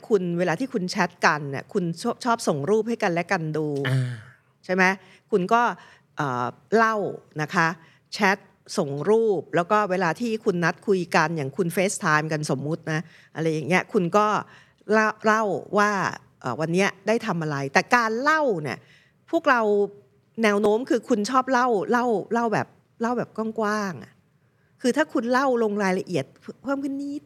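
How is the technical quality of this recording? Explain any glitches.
The recording has one recurring fault: tiny skips in the speech. They fall at 2.67, 8.67, 14.66, 20.66 and 26.65 seconds. Each is audio missing between chunks. The cause is likely a recorder that works in blocks of about 6 seconds and drops a sliver of sound at each handover. Only a few milliseconds go each time. The two sides are joined directly, with no gap. So the speech jumps forward slightly, at a steady rhythm.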